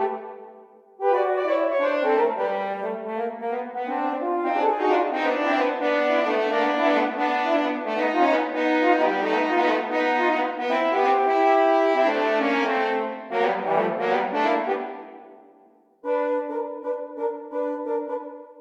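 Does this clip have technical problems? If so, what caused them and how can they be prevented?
No, nothing in this one jumps out as a technical problem, so there's nothing here that needs preventing.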